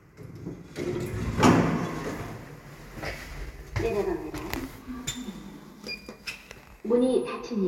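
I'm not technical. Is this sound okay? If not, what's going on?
Yes, it sounds fine.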